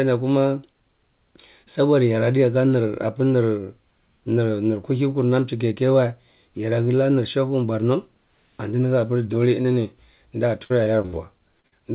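Right after "borno antindi hapir dole", at 9.62 s, a brief smear passes by. This is short concealed packet loss: about 20 ms arrived too late, and the receiver filled the gap by extending the preceding sound.

From 10.64 to 11.14 s the speech turns choppy and robotic. This is repeated packet loss. Four gaps, the longest 63 ms, were each patched in turn, and together they account for about a third of that half-second.

At 11.60 s and 11.68 s two more quick smears follow, each about 40 ms of short concealed packet loss bridged by continuing the last sound.

The audio stops at 4 kHz throughout, which fits a narrowband G.711 A-law call path.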